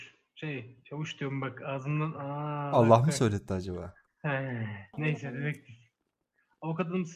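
No technical faults can be heard anywhere in this clip.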